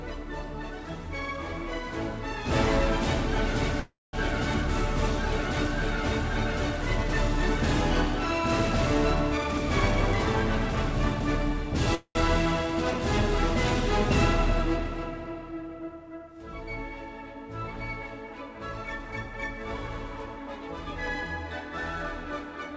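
At 3.80 s the sound stops moving forward. A call audio freeze sets in and lasts until 4.15 s. The last sound carries on as a fading buzz or hiss, and the final 0.2 s is silence. The likely cause is delayed packets draining the jitter buffer. When the audio returns, it picks up where it left off. Nothing is lost, but everything after it now runs about 0.33 s late.

From 9.37 s to 11.85 s there is a jitter buffer speed-up. The audio plays at 111% speed with its pitch unchanged, so it sounds hurried. The receiver had built up too much delay. It trims it by cutting out many tiny pitch-length pieces in a row, removing roughly 0.3 s in total.

At 11.95 s a second call audio freeze begins, ending at 12.17 s. This gap is about 0.2 s, and its last 80 ms is silent. The audio then resumes with nothing missing, just later again. Throughout the clip, nothing is heard above 8 kHz, which fits a wideband call codec such as G.722.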